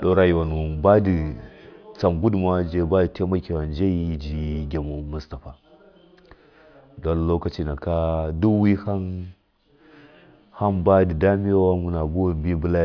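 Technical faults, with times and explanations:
No technical faults can be heard in this speech recording.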